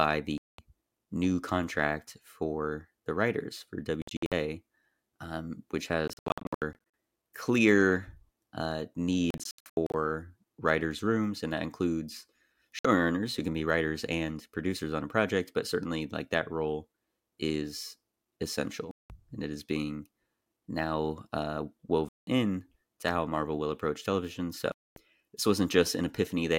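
Abrupt silent holes cut into the speech at 0.38–0.59, 4.02–4.32, 6.08–6.75 (after "um which"), 9.30–9.94, 12.79–12.85 (between "rooms and that includes" and "who can be writers"), 18.91–19.10 (before "and it is being"), 22.09–22.27 and 24.72–24.96 s. These are likely Bluetooth dropouts, where late packets were discarded. Unlike an edit splice, the speech resumes further along as if it kept playing. At 4.0, 6.1 and 9.3 s the gaps break into choppy clusters rather than one hole.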